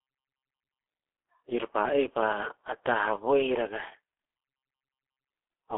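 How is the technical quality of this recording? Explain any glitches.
Technical quality is poor throughout. The speech sounds muffled, hoarse and boxy, with consonants smeared together and no air or sparkle at the top. That is G.723.1 codec damage, and it is heavy. The audio is confined to a telephone band of roughly 300 Hz to 3.4 kHz, with nothing above 3.5 kHz, so sibilants and crisp edges vanish. The codec fits a simplified voice model to long 30 ms frames, which matches a bitrate around 6 kbit/s. Because the model updates slowly, quick transitions blur and the voice takes on a rough, synthetic grain.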